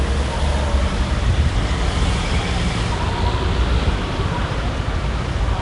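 Throughout, the sound has a rough, hissy halo and a smeared, underwater quality, with nothing above 10.6 kHz. This is likely Nellymoser compression, at a rate near 44 kbps.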